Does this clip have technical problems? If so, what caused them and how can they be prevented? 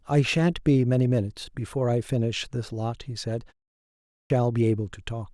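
Yes. At 3.82 s, after a pause of 0.38 s, the speech resumes with a clipped start after a pause: the output stays silent until 4.30 s, swallowing about 0.48 s of onset, so the sound bursts in abruptly without its opening. The output path went idle during the gap and needed time to wake and lock again. Muted pauses would only silence the gap itself and return in time, losing nothing. Keeping the output stream active through silences prevents this.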